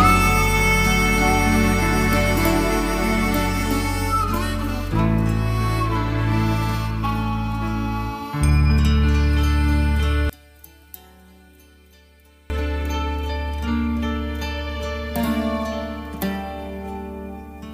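From 10.30 to 12.5 s the sound collapses to a faint residue, dropping about 28 dB before returning at full level. The likely cause is one channel inverted: with one stereo channel's polarity reversed, the shared content cancels when both channels are summed to mono.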